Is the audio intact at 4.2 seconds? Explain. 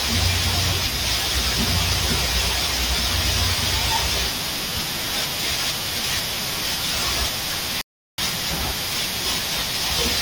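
Yes, the audio is intact at 4.2 seconds, with no dropout, glitch or other fault at that moment.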